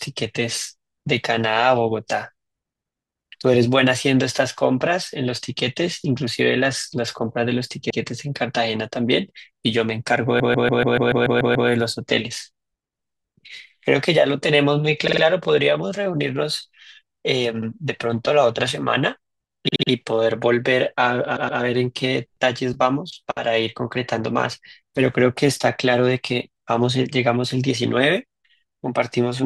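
Repeated frames cause stutters in this speech at 7.90 s, 10.39 s, 15.07 s, 19.68 s and 21.36 s. Short blocks of compressed audio were played again: 96 ms once more, 144 ms nine more times (a 1.3 s loop ending at 11.69 s), 48 ms three more times, 72 ms three more times, and 120 ms twice more. The repeats lengthen the clip.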